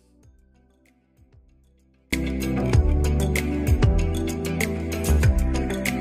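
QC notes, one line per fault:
0.00–2.13 s: audio dropout to a faint residue. The clip opens already inside the dropout, so the first two seconds hold only a faint leak of the sound, roughly 35 dB below its normal level, before the full signal cuts back in abruptly at 2.13 s. The return is a step, not a fade, which points to the wanted feed likely being lost upstream while the path after the break stayed live and carried this low residue.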